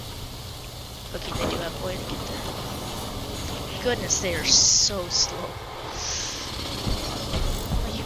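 No technical faults are audible.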